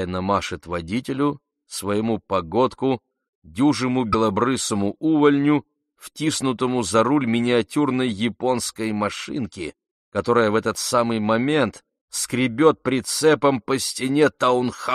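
At 4.12 to 4.15 s the audio jumps ahead and a brief glitch lasts about 32 ms, a little over one 26.1 ms frame. This is most likely a broken MP3 bit reservoir: after a cut in the stream, the next frame reached back for borrowed bits and decoded bytes that belonged to another frame. On a spectrogram it shows as a thin vertical break in the pattern; the waveform shows an abrupt discontinuity with a short irregular patch.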